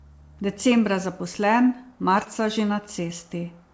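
Speech over a call path that tops out at 8 kHz, sounding like G.722. Around 2.24 to 2.28 s there's short concealed packet loss: roughly 20 ms went missing and the decoder papered over it by extending the previous sound, so you get a quick smear.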